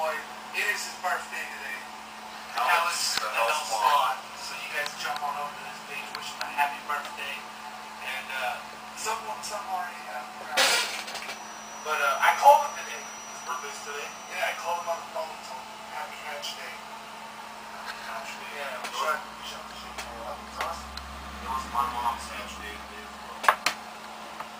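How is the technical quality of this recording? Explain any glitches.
One glitch stands out: from 11.19 to 15.11 s a feedback whistle sits steadily at 5.9 kHz, about 15 dB below the sound, likely from a speaker-to-microphone loop held just short of runaway; a spectrogram shows a thin horizontal line.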